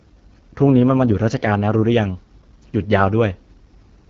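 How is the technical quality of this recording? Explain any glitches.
The technical quality is compromised by codec damage that runs through the whole recording. AMR wideband (HD Voice) codec, throughout: a pulse-driven vocal tract model strained at a low rate, which fits 8.85 kbit/s, makes the speech rough and raspy, with nothing above 7.3 kHz.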